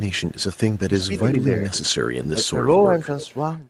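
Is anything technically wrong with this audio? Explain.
Yes. The speech has two faults. The first is echo leak, heard at 0.11–0.79 s, 1.04–1.21 s, 1.43–1.63 s, 2.24–2.29 s and 3.20–3.33 s. A faint, separate repeat of the speech trails it by 330–341 ms. It sits about 35 dB below the speech in the first and fourth spots and about 20 dB below elsewhere. The cause is likely a loudspeaker echo that the far end's canceller didn't fully remove. Room reverberation would smear into a continuous tail, but this is a distinct delayed copy.

The second is speech suppressed in double talk, at 0.88–1.38 s, 1.68–1.86 s and 2.32–2.55 s. Here the level dips, by up to about 15 dB, and by about 10 dB in the middle one. The first of these dips overlaps echo activity, which points to the canceller likely ducking the talker while both sides were active. They are partial, uneven drops rather than the clean silent gaps of packet loss.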